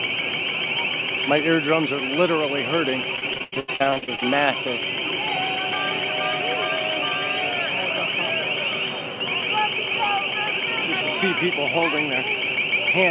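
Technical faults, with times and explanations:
3.16 to 4.23 s, repeated packet loss (robotic sound): over about a second the stream drops out fifteen times, the longest hole about 84 ms, and each one is bridged by stretching the last received sound forward, so roughly 44% of the stretch is synthetic fill. Those repeated extensions of stale audio give the choppy, robotic texture, and pieces are still missing. The band-limited call audio, with nothing above 4 kHz, fits a G.711 A-law path at 64 kbps.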